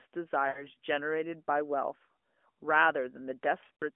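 Lost AMR speech frames at 0.48 to 0.65 s and 3.64 to 3.83 s: the decoder filled failed frames by reusing the last good pitch and vocal tract settings at falling gain. First, about 80 ms smears and fades. Later, short warbling dips scatter, none over 40 ms.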